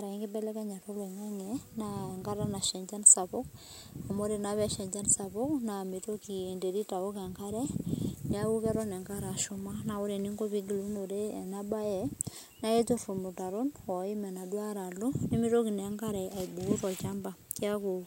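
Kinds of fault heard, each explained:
DECT cordless phone buzz: a thin, steady buzz runs under the speech from start to finish, pulsing at 100 Hz and rich in harmonics, so it sounds edgy and nasal rather than like a smooth hum. A nearby DECT handset or base station transmits a short radio burst every 10 ms, and somewhere in the audio chain a circuit rectifies that burst into an audible signal. Here the buzz sits roughly 40 dB below the speech, faint but constant.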